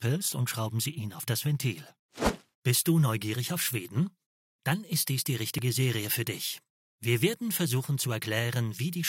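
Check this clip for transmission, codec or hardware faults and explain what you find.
Three short skips at 5.58 s, 6.58 s and 8.23 s are likely dropped buffers (overrun). Each is a point where the sound jumps forward with no gap, losing about 10 ms at the first and about 5 ms at the others. Incoming samples were overwritten before the software read them, so the surrounding audio was joined directly. The missing silence separates this from an underrun, which inserts a brief hole, and the forward jump sets it apart from an isolated click.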